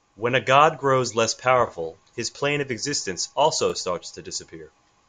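A speech clip with a brief stutter from 3.70 to 3.72 s, where about 23 ms of audio plays twice: overlapping chunks, with a chunk starting before the previous one ended, consistent with 2-second chunks.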